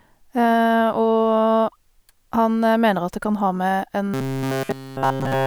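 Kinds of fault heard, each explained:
Robotic sound from repeated short buffers: from 4.14 s to the end, the speech becomes a rigid metallic buzz at 134 Hz that loosely tracks the words. The likely cause is a starved stream looping a segment of about 7.5 ms in place of essentially all the real audio.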